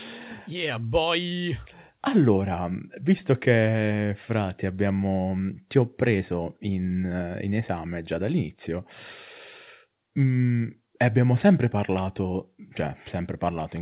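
No technical faults occur at any point; the speech simply carries the narrow, telephone-like band of a G.711 mu-law call path, with nothing above 4 kHz.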